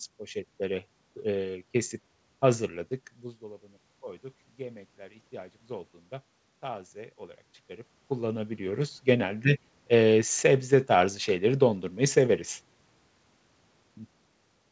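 From 3.39 to 5.98 s, automatic gain rising is audible: the voice drops by about 19 dB around 3 s, as the talker moves away, and the gain control then slowly lifts it by about 5 dB. Unlike that movement, this swell raises the room noise along with the voice.

Between 9.92 and 12.42 s, automatic gain falling occurs: the controller eases its gain down by about 3 dB, so the voice sinks gradually, with the background dropping alongside it rather than the voice alone, as it does when the talker shifts near 8 s.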